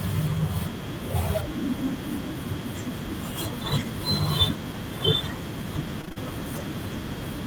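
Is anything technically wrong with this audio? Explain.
Yes. Repeated packet loss (robotic sound) occurs from 6.01 to 6.18 s. Over this short stretch the stream dropped data four times in quick succession, the longest hole about 33 ms. Each gap was filled by stretching out the sound just before it, so roughly half of this 0.16 s span is patched-in material rather than the original speech. The result is a brief choppy stutter with fragments of the speech missing.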